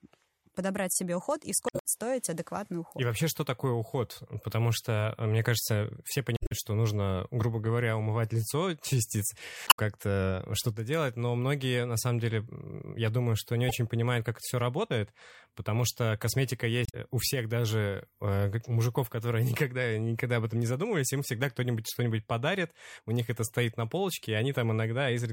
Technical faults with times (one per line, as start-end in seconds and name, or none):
1.66-1.86 damaged data in a compressed stream
6.34-6.52 damaged data in a compressed stream
9.64-9.79 damaged data in a compressed stream
16.85-16.95 damaged data in a compressed stream